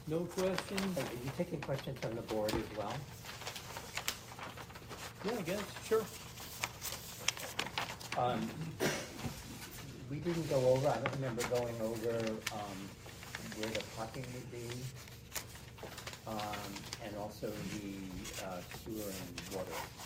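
Nothing stood out as a technical fault on listening to this clip.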